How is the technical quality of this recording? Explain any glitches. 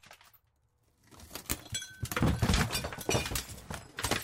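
No technical faults or glitches can be heard here.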